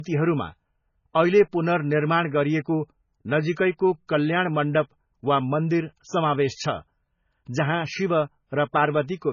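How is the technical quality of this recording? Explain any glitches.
Quality is limited by one fault present throughout the speech. Low-bitrate audio saved at a high bitrate, from start to finish: nothing remains above 7 kHz, and the dull, smeared coding artefacts sound like a very low-bitrate MP3, likely later re-encoded at a high bitrate that could not restore the lost detail.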